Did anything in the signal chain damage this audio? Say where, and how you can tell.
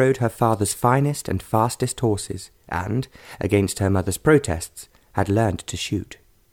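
No, nothing audible points to damage at any stage of the signal chain, and the signal holds together as a continuous, intact recording.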